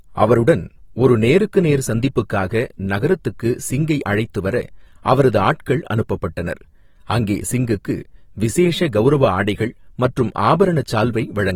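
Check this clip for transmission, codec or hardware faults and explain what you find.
One fault runs through the whole of the speech: AAC compression, with plainly audible coding damage from start to finish. The cause is likely lossy AAC-LC encoding at a modest rate, which fits a bitrate of around 45 kbps. The encoder splits each frame into frequency lines and spends its limited bits only where a hearing model says they matter. Finer detail is coarsely quantised or dropped, which leaves a smeared, warbling texture in the sound. Nothing is present above 19.4 kHz.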